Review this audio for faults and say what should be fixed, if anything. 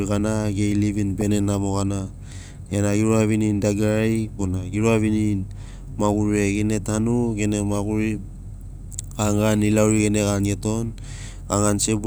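No faults; nothing needs fixing.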